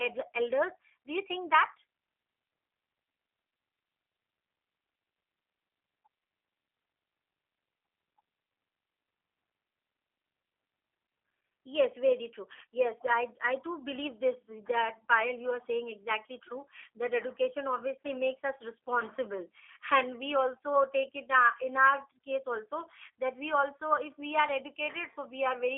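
From start to finish the speech carries G.729 codec coloration. At roughly 8 kbit/s, a G.729A-style coder rebuilds the sound from a filter model plus sparse pulses. The result is plainly rough and synthetic, and the spectrogram shows an empty band above 3.6 kHz.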